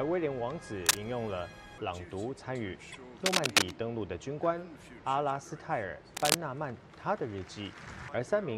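From 0.86 to 1.04 s a burst of cable scratch noise rides over the sound: dense, uneven crackle and rustle, somewhat louder than the programme. The likely cause is a worn cable or connector being moved, its contact resistance fluctuating rapidly. At 2.91 s repeated frames produce a brief stutter. A 26.1 ms block plays a second time, which fits a single compressed frame being sent or written twice. The audio runs 26.1 ms longer. The same scratching returns from 3.25 to 3.73 s, the longest burst, and again from 6.15 to 6.36 s, each time as irregular rustling noise over the sound at a similar level.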